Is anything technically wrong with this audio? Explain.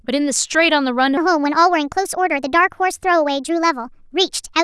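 Yes. From 1.17 s to the end at 4.64 s, the speech abruptly turns high and hurried, a section at the wrong speed. It plays about 1.35 times faster than it was recorded, so pitch rises by roughly five semitones along with the tempo, giving the voice a squeaky, rushed quality from that point on. The likely cause is that this part was played back or resampled against the wrong clock, so speed and pitch shifted together.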